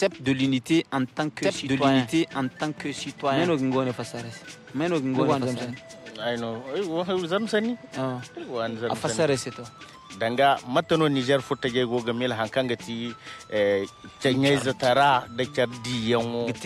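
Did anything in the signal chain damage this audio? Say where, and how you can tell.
Yes. From 1.43 to 5.71 s there's a doubled audio track: a dry copy, about equally loud, trailing about 1.5 s behind, likely a second capture path or misaligned edit.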